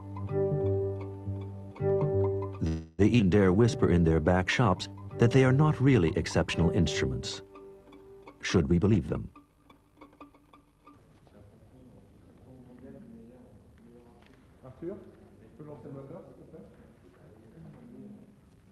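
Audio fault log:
2.67–3.01 s, call audio freeze: the last sound is stretched into a fading buzz for 310 ms, likely because late packets emptied the jitter buffer; nothing is lost.
3.18–3.22 s, skip ahead: playback jumps forward almost seamlessly, dropping roughly 150 ms of sound as buffered later audio is joined directly to what came before.
3.57–5.01 s, jitter buffer slow-down: repeated pitch periods add 149 ms, so the sound runs at 90% speed with unchanged pitch and drawn-out sounds.
8.78–11.22 s, jitter buffer speed-up: short pitch-period pieces are cut, removing about 300 ms, so the audio plays at 112% speed with unchanged pitch and sounds hurried.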